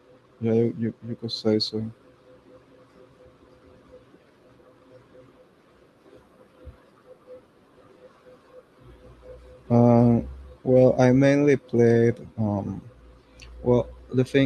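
Speech recording, no technical faults detected anywhere in the clip.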